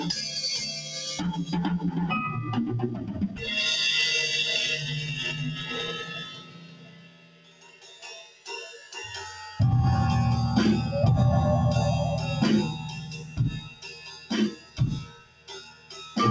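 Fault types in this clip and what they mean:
Noise suppressor applied to music or sounds: a suppressor tuned for speech stayed active and kept mistaking steady content for noise. Its gain rides up and down by roughly 20 dB through the clip, so attacks pass while sustained parts and tails sink, giving a pumping, thinned sound.
Sound cut by the noise suppressor: at certain moments the suppressor clamped harder, dropping held or fading sound by about 6 to 12 dB. The longest dip runs from 6.05 to 8.48 s, and a cluster of dips falls between 13.69 and 15.94 s.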